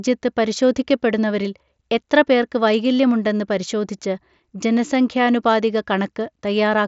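Nothing stood out on listening to this speech clip.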